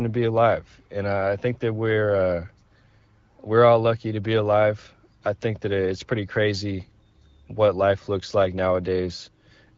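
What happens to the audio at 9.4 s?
Nothing goes wrong at 9.4 s: the speech continues intact through that moment, carried by the AMR wideband (HD Voice) codec at 12.65 kbit/s with only light coding effects.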